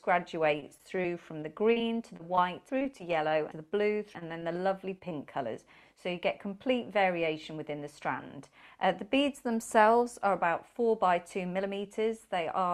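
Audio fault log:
0.57–5.13 s, repeated packet loss (robotic sound): 21 short dropouts, longest 34 ms, each patched by stretching the last sound, so it goes choppy and robotic.
7.03–7.59 s, jitter buffer speed-up: the receiver trimmed around 40 ms in tiny pitch-period slices to shed backlog, so it plays at 105% speed, same pitch, and feels hurried.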